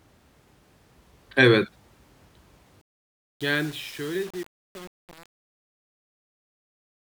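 Speech that turns gritty and grainy from 2.81 s to the end at 7.03 s, as the fade-out that begins around 2.8 s grows quieter. This is truncation distortion on a fade: the fade was computed without dither at too few bits, consistent with roughly 7 bits, so the waveform collapses into coarse steps.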